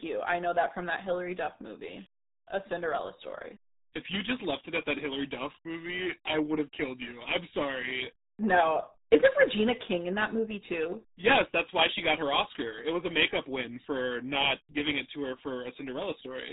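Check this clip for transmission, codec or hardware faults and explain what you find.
One codec fault runs through the whole speech clip. RealAudio 14.4 codec, throughout: this dial-up era speech coder squeezes the signal to a rate that points to about 8 kbit/s, discarding everything above 3.8 kHz and coarsely modelling the rest, so speech sounds muffled, gargly and heavily damaged from start to finish.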